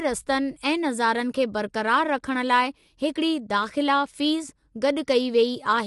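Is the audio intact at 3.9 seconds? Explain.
No, not really. At 3.9 seconds, like the rest of the clip, the speech has a rough, grainy texture with noise filling the gaps between harmonics, and nothing is left above about 11.6 kHz. That's most likely low-delay AAC compression (AAC-ELD), the kind used for video calls. Its very short frames can't resolve the pitch harmonics cleanly, and the damage is plain enough to suggest a low bitrate, around 32 kbps.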